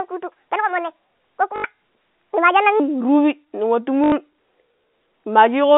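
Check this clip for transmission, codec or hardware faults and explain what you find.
Two kinds of fault are present: a stretch played at the wrong speed, and two short packet-loss gaps concealed by repetition.

From 0.0 to 2.8 s the speech runs at the wrong speed, 1.5 times too fast, likely because that section was resampled or played against a mismatched clock. Speed and pitch rise together, so the voice sounds hurried and about seven semitones higher than normal, a chipmunk-like lift. It drops back to natural pitch and pace after 2.8 s.

Packet loss with the last packet repeated occurs twice, from 1.56 to 1.64 s and from 4.04 to 4.12 s, each an 80 ms gap, which fits four lost 20 ms packets. The receiver filled each gap by replaying its last good packet. The repeated copies make the run buzz at about 50 Hz. The result is a brief robotic stutter. The first gap falls inside the sped-up stretch. 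All of this sits within the narrow G.711 telephone band of roughly 200 Hz to 3.6 kHz.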